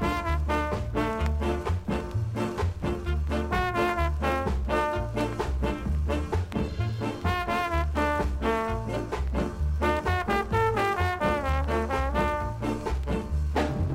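No technical faults can be heard anywhere in the audio; the signal stays steady and intact throughout.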